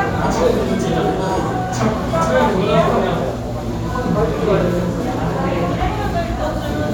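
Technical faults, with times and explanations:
Nothing here to flag; I couldn't hear a single technical problem anywhere in the audio.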